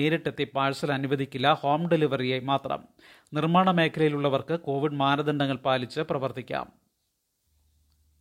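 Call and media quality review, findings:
No faults found on review of the speech audio; nothing to raise against the call or media path.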